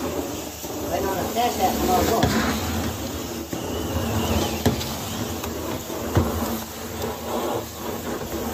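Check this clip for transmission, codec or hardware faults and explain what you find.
Nothing stood out on listening to this clip.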